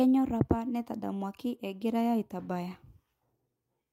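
Small, uneven timing hiccups run through the whole speech clip. This is clock drift between sender and receiver: the sender's clock runs about 2% slow, so the receiver's jitter buffer keeps draining and has to be topped up to keep playback going.

From 0.56 s to 3.86 s come repeated timing corrections, heard as a slightly unsteady, dragging tempo at about 98% speed. The receiver keeps repeating short pieces to cover the slower sender, adding roughly 70 ms in total.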